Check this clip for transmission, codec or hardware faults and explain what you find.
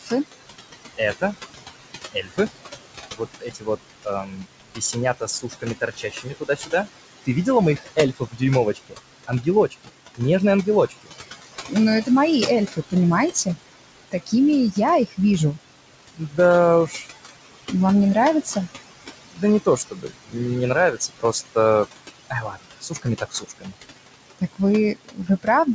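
Two faults come from noise suppression rather than the transmission itself; the band ending at 8 kHz fits a G.722 wideband call path at 64 kbps.

Noise suppressor artifacts run throughout. The suppressor pulls down the room noise, which sits about 10 dB below the speech, by about 17 dB frame by frame. As a result, the background drops in the pauses and swells under the speech. A spectrogram shows patchy, flickering noise cells and near-empty gaps.

Speech cut by the noise suppressor also spans the whole clip, from 0.0 to 25.74 s. The suppressor mistakes quiet speech for noise and attenuates it, by about 21 dB at its deepest, so soft consonants and word endings sound swallowed. The waveform shows clipped tails, and the spectrogram shows faded high-frequency fricative energy.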